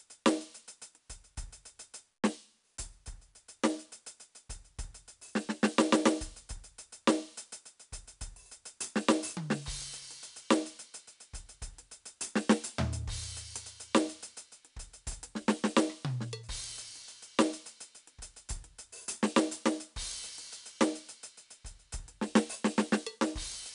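4-bit ADPCM compression runs through the whole piece of music. Each sample is stored as a coarse 4-bit step from a predicted value, and the step size adapts as the signal moves, so quantisation error rides on every loud passage as a gritty hiss that rises and falls with the level. Sharp attacks smear and distort where the step lags behind. Nothing is present above 10.6 kHz, which fits a low sample rate near 22 kHz and dulls the top end.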